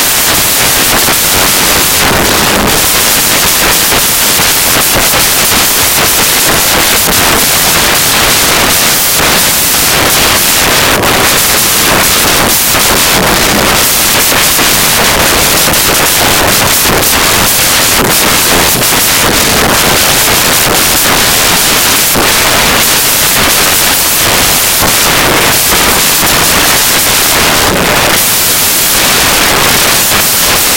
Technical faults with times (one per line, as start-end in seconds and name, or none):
0.00-30.76 samples built from the wrong bytes